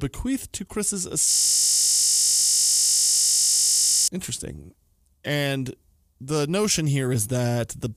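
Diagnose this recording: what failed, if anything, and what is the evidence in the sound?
System hang loop at the driver buffer: the system froze, hardware looping one 20 ms slice, so 1.31 to 4.08 s is a steady 50 Hz buzz.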